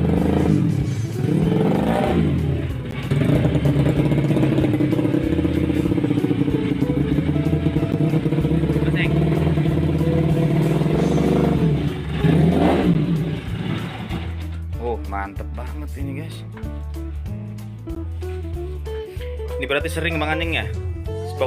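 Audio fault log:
2.91 s, 7.92 s, 12.94 s, 17.95 s: gap between chunks. There's a tiny hole every 5 s, each about 13 ms of dead silence. It looks like the audio arrived or was stored in 5-second blocks and something, maybe codec padding or a player starting each block a touch late, left a sliver of nothing at every join. Nothing gets cut out; the sound just stalls briefly at each seam, so you hear a regular little dropout.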